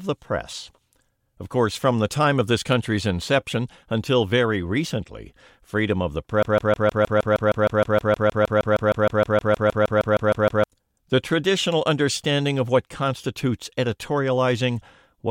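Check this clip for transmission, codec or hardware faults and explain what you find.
One fault is present, a broken-record loop. From 6.43 s to 10.64 s, right after "recently freedom of the", a 156 ms fragment of speech repeats exactly, back to back, 27 times, and the speech meant for those four seconds never arrives. The likely cause is a stalled player or stream resending its last held buffer. Unlike jitter or a stutter, each repeat is sample-identical, with no gaps or varying lengths.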